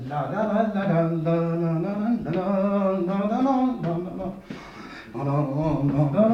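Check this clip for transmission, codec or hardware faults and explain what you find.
Nothing in the clip points to a problem in transmission, coding or hardware. The sound holds steady throughout, with no break, glitch or change in character.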